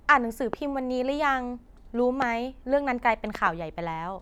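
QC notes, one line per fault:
0.53–0.56 s, 2.22–2.24 s and 3.35–3.49 s, loud pop: each is a sharp, brief crack standing about 15 dB above the speech, which carries on underneath without a break. The first two are single pops; the last is a double pop. The likely cause is a sudden voltage step or pulse, from a switch, connector, static discharge or driver glitch, entering the signal path, with the later circuitry shaping it into an audible click.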